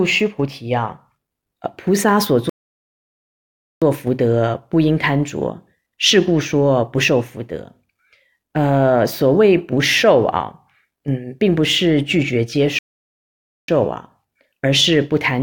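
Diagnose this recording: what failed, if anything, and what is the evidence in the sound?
Playback stalled twice, likely because the player's buffer ran dry or its output thread was blocked. The speech drops to silence mid-flow from 2.49 to 3.82 s, about 1.3 s, and again from 12.79 to 13.68 s, about 0.9 s, before sound resumes.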